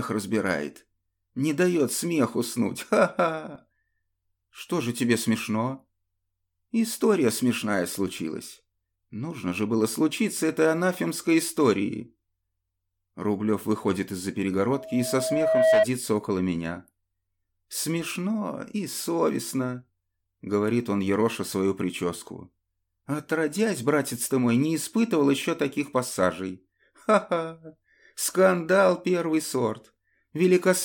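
A single 644 Hz tone swells out of the audio from 14.66 s to 15.86 s, building over roughly a second into a squeal about 10 dB louder than the sound itself. This is loudspeaker feedback squeal: a microphone picked up its own loudspeaker, and at that frequency the loop gain exceeded one, so the tone kept reinforcing itself.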